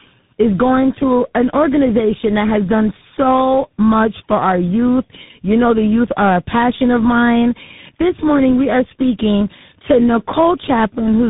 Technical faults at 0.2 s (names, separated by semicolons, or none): tandem speech coding